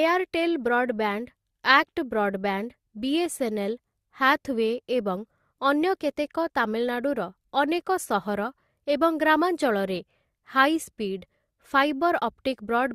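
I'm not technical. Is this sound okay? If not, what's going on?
Yes, nothing in this speech recording points to a technical problem with the signal itself.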